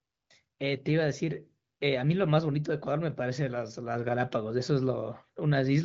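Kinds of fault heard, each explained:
No faults can be heard in the speech. The AMR wideband (HD Voice) link at 18.25 kbit/s sounds clear, with at most faint coding roughness and nothing above about 7.5 kHz.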